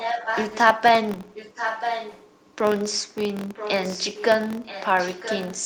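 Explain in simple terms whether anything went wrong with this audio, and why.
A steady buzz runs through the whole recording, at about 43 ticks per second. This is a filter restarted on every block: a processing step forgets its state each time, which fits 1024-sample blocks, so every block starts with a small click. The buzz gets louder when the speech does.

A delayed copy of the speech, trailing by almost a second, is heard from 0 to 0.59 s, 1.34 to 2.32 s, 3.54 to 4.25 s and 4.63 s to the end. It is fairly strong in the first two stretches and fainter later. The likely cause is echo leak: a loudspeaker's output reached a microphone and was sent back.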